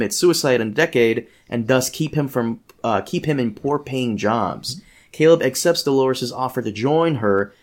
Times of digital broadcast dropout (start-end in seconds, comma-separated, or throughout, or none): none